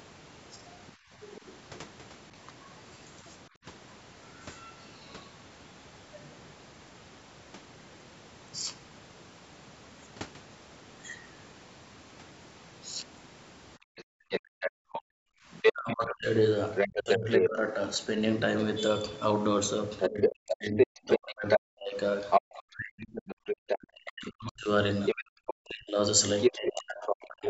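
Between 0.95 and 3.65 s the room background is gated by the echo canceller. While the loudspeaker plays, the microphone is pulled down by up to about 22 dB. The background ambience dips for roughly a third of a second in total and then returns.

From 1.31 to 1.78 s a faint second voice sits well below the talker. This is the other side's voice leaking through, likely loudspeaker echo that the canceller failed to remove. It is distinct from the gating because an extra voice is added, not room sound removed.

The gating returns from 13.78 to 15.34 s and cuts much deeper, about 40 dB. The background drops out for around 0.7 s.

From 13.96 to 27.26 s the leaking far-end voice is about as loud as the talker, so two voices overlap for most of the second half. In the same span, from 14.09 s to the end, the speech is suppressed in double talk. Both sides likely speak at once, and the talker's own voice dips deeply, loses its high end, or drops out in pieces. 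This differs from background gating because the speech itself is cut, not only the room sound.

A third brief gate, about 32 dB deep and roughly a tenth of a second in total, falls between 23.38 and 25.26 s.

Throughout the clip the call's microphone processing band-limits the audio, with nothing above 8 kHz.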